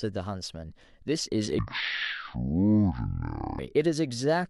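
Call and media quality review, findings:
Speech drops to half speed and an octave low, 1.59–3.59 s. Stereo read as mono: interleaved left/right samples consumed sequentially as one channel, doubling sample count per second of audio. Probable component: decoder or playback path channel-count handling.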